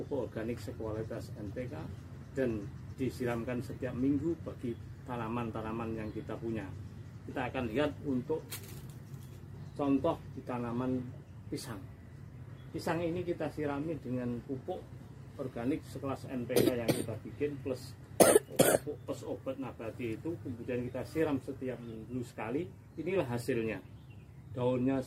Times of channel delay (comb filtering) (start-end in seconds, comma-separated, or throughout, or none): none